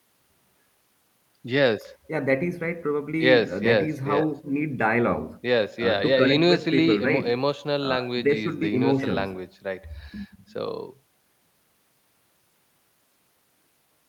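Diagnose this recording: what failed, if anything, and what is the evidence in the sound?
Nothing in the recording points to a failure at any stage of the chain. No event can be heard that would tie a problem to the wiring, conversion, processing, transmission, storage or playback of this speech.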